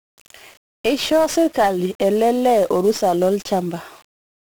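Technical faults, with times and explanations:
Throughout: 1-bit DFPWM compression. Each sample is reduced to a single up-or-down bit steering an adaptive level, which fits a 48 kbps stream, so the speech carries heavy broadband quantisation noise, sounding fuzzy and crackly, with its treble dulled or replaced by hiss.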